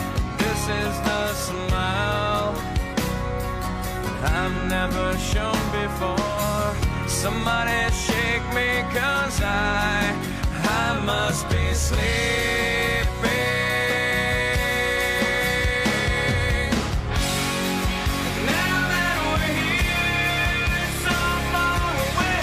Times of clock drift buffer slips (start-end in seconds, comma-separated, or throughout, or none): none